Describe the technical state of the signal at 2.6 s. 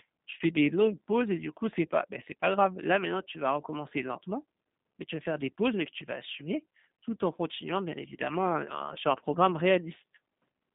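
At 2.6 s you're hearing G.729 codec damage, and it runs through the whole clip rather than just that moment. The codec throws away the actual waveform and rebuilds the speech from a vocal-tract filter, a pitch predictor and a few pulses per frame, which fits an 8 kbit/s G.729A stream. So the speech comes out rough and a bit synthetic, squeezed into roughly 150 Hz to 3.7 kHz with nothing above that.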